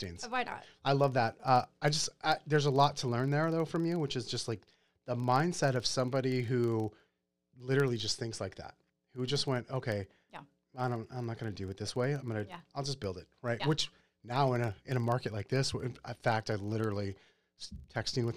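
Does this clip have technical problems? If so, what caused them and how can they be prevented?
Yes. Running under the speech for the whole clip is a filter restarted on every block: some filter stage drops its internal state at each block boundary and begins from zero, so every block opens with a small transient. Those transients stack into a steady buzz at 25 Hz, which fits blocks of about 40 ms, and the buzz rises and falls with the speech level. Carrying the filter's state across from one block to the next prevents this.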